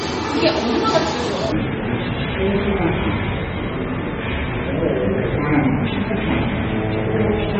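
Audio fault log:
throughout, MP3 compression. The damage is plainly audible. Weak frequency components drop in and out from frame to frame, which gives a watery, swirling texture. Bright transients turn into metallic chirps, and sharp attacks smear. This most likely comes from low-bitrate MP3 encoding, around 32 kbps. At that rate the encoder discards detail it judges less important.
1.52 s to the end, section at the wrong speed. From 1.52 s the audio plays at half speed. Everything slows and drops in pitch together, by around ten semitones. Events stretch out and sound deep and sluggish. The change arrives abruptly rather than as a gradual drift. The likely cause is this stretch being played or edited against the wrong clock. That would stretch time and lower pitch by the same ratio.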